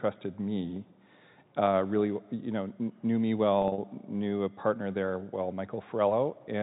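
From 3.62 to 3.78 s, after "you know knew me", packet loss with pitch repetition: gaps of up to 40 ms are filled with repeated pitch periods, causing brief buzzy holds.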